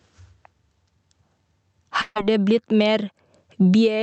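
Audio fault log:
throughout, gain pumping: The level swings by around 20 dB, so loud and soft parts sit squashed close together. The likely cause is gain set far too high, with a fast limiter or compressor clamping each peak.
2.01–2.17 s, burst of packet loss: The last sound is held and fades, falls silent for about 30 ms, then resumes at "det blitt" with about 140 ms skipped. Several packets arrived too late or not at all, and the receiver stretched the last sound to cover the gap.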